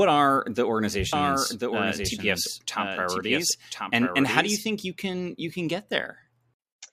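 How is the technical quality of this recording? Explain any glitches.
The recording has one clear glitch, a doubled audio track. From 1.13 s, right after "are the", until 4.59 s, just before "think you can you", a full-band copy of the speech runs about a second behind the original and a few dB quieter, with no reverb. It is likely caused by a second, slower capture path or by misaligned edit copies. It sounds like an overlapping echo that switches on and off abruptly. On a spectrogram, the same harmonic patterns repeat one second apart; on the waveform, the envelope shows a shifted duplicate with hard edges.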